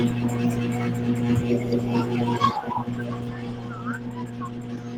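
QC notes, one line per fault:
2.21 s, skip ahead: about a second of speech is missing. That stretch was dropped, either on the way or by the jitter buffer when it overflowed, and playback jumped straight to later material already queued, so the two sides join with no gap.
2.25–4.97 s, jitter buffer speed-up: the buffer was still holding more than its target, so short pitch-period slices were cut out repeatedly. That removed about 0.4 s in total, making the speech run at about 115% speed with unchanged pitch and sound hurried.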